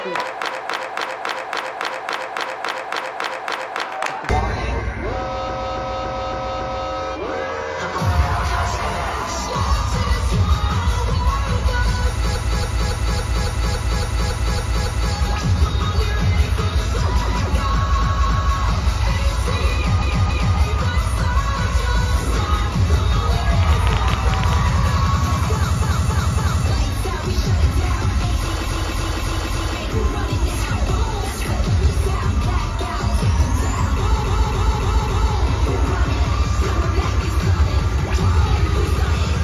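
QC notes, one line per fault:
0.47–3.81 s, 5.44–6.83 s, 12.31–15.10 s, 17.93–18.49 s, 19.97–20.53 s, 25.78–26.61 s, 28.61–29.73 s, 34.18–35.30 s, repeated frames: the same 0.28 s block stutters two to twelve times over, because stored or sent frames were replayed.
23.63–24.54 s, train of clicks: around ten sharp, similar ticks at an uneven pace, about 11 per second and about 15 dB above the sound, likely interference pulses from nearby equipment.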